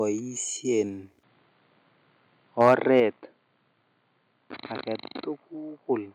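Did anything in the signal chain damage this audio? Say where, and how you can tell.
Yes. From 2.6 to 3.0 s the loudest syllables take on a harsh, crackling edge, their peaks flattened. This is microphone overload, likely at the converter stage: input gain pushed the signal about 6 dB past full scale, clipping a small fraction of samples.

At 3.0 s the speech and the background fall together by about 5 dB in a single step, immediately after the distorted stretch. This is the microphone volume stepped down, probably by call processing reacting to the clipping and cutting the device's input gain at once.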